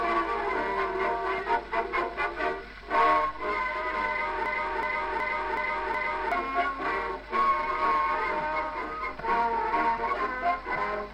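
A system hang loop runs from 4.46 to 6.32 s. The system froze while the hardware kept replaying its ring buffer, so one 0.37 s slice repeats five times at 2.69 Hz, which fits a 16384-sample buffer, and roughly two seconds are lost.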